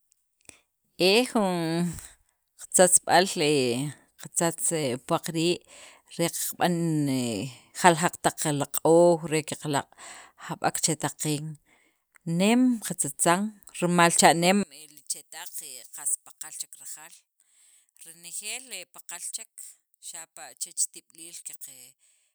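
Speech that, from 14.63 s to the end, falls by about 18 dB and turns faint, its centred content almost gone. The likely cause is one channel inverted: one stereo side has reversed polarity, so material common to both cancels in a mono sum.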